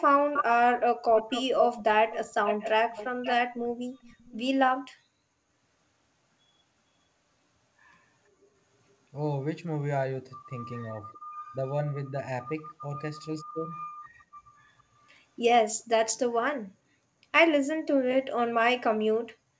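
From 0.33 to 0.44 s, again from 1.14 to 3.68 s, and briefly from 4.02 to 4.36 s, a delayed copy of the speech trails the talker by 466 ms. This is an echo leak, likely from a far-end loudspeaker whose echo canceller let part of the pickup return. In the first two stretches the copy sits only about 5 dB below the speech. By 4.02 s it is around 25 dB down and faint. On a spectrogram the copy appears as the same harmonic patterns shifted right by almost half a second. In the waveform, gaps between syllables fill with lower-level duplicates. Everything stays inside the 8 kHz band of the G.722 call path.

Later, at 11.05 to 11.16 s, 11.52 to 11.57 s and 13.87 to 14.07 s, the speech briefly dips or drops out. This is speech suppressed in double talk, likely because the echo canceller mistook overlapping talk for echo and turned the talker down. The first two dips are shallow, around 10 and 15 dB, lasting tens of milliseconds. 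The third cuts almost to silence, about 40 dB, for roughly a tenth of a second. The waveform shows a sudden notch in the envelope, and the spectrogram shows a vertical gap across the band.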